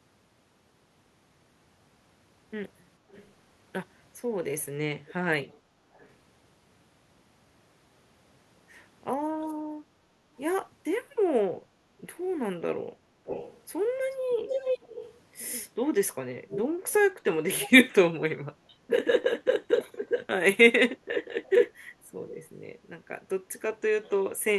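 Speech with an echo leak: a delayed copy trails the talker by 444 ms at 3.1–3.3, 5.1–6.1, 13.3–15.2, 16.5–17.0, 17.6–17.7, 21.44–21.51 and 22.3–22.5 s. The copy is faint in most places but nearly as loud as the speech around 13–15 s. The likely cause is a far-end loudspeaker echo canceller letting residue through. On a spectrogram, it shows as ghost harmonics shifted right of the speech.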